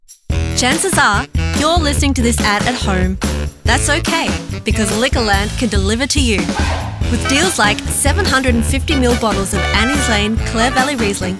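Nothing is technically wrong with the audio.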